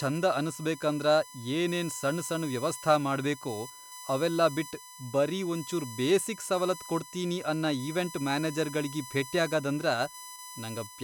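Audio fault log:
Throughout: USB whine. A steady 1 kHz tone sits under the speech, roughly 15 dB below it. Current drawn in 1 ms bus frames leaks through power or ground.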